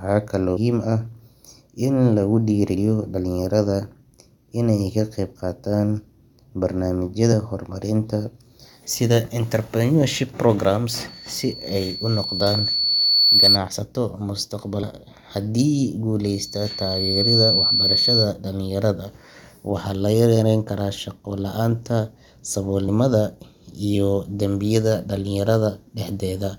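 Corrupted frames in the compressed speech stream cause the decoder to misread data, lose sync and hunt for the next valid frame header. Each event is a brief chirp or blip, at 0.56–0.58 s, at 2.74 s just after "in lagu", and at 7.32–7.34 s.

From 11.07 to 13.58 s, right after "sida entrepreneurship programs", a loudspeaker feedback squeal occurs. The microphone picks up its own loudspeaker, and at 4.4 kHz the loop gain exceeds one, so that tone feeds itself. It swells over roughly two seconds into a piercing whistle about 10 dB above the speech.

Damaged stream data returns at 14.82 s as another short blip.

Feedback recurs at 16.23–18.31 s at the same 4.4 kHz. It rises within about a second to a quieter squeal, roughly 5 dB above the speech, and stops just before "dhalinyarada waxaa la yarayn".

A final chirp from corrupted data falls at 22.87 s.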